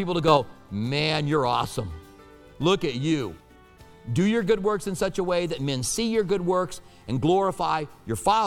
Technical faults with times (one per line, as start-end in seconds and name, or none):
0.28-0.37 sudden gain jump